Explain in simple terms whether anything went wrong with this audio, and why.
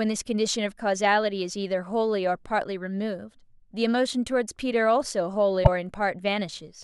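A short, garbled blip cuts into the speech from about 5.61 to 5.68 s. This is damaged data in a compressed stream: part of the file was corrupted, so the decoder misread that stretch and had to find its place again.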